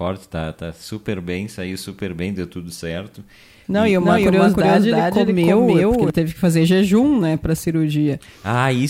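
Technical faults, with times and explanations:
4.00–6.10 s, doubled audio track: after "e e", the speech is joined by a second, full-band copy trailing roughly 300 ms behind and at about the same level, so each syllable is heard twice in quick succession. The copy has no decay or room colour, and it cuts in and drops out abruptly before "teve que fazer jejum". This is likely a second capture through a slower path, or two out-of-step copies held by an edit.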